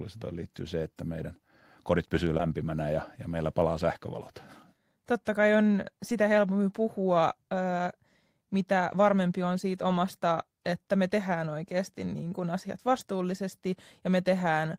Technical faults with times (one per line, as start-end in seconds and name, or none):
2.37-2.41 short concealed packet loss
2.39-2.41 lost packet rebuilt from error correction